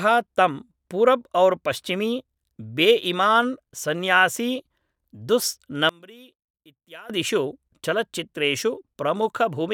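Speech, in which one stereo channel likely had its polarity reversed between 5.89 and 7.10 s, the one channel inverted fault. With one side flipped, everything the two channels share cancels when they are summed, so the centred speech drops by about 24 dB for that stretch. What survives is only the small difference between the channels, a faint remnant of the speech, before full level returns after 7.10 s.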